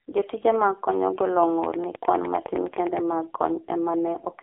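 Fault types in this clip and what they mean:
AMR narrowband mobile codec: Throughout, the speech sits in a phone-line band of roughly 300 Hz to 3.4 kHz, with nothing above 3.7 kHz, and sounds heavily buzzy and synthetic, which fits a low mode near 5.9 kbps. A simple band-limit would leave the voice natural rather than rebuilt and buzzy.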